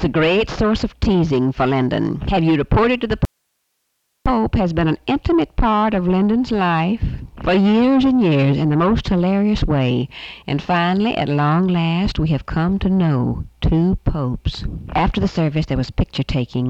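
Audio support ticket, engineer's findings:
Audio dropout to a faint residue, 3.25–4.26 s: signal lost for about 1.0 s, gap holds only hiss roughly 55 dB below programme level. Abrupt cut and return, no fade. Likely an upstream source or link interruption while the downstream chain stayed live, passing its own noise floor.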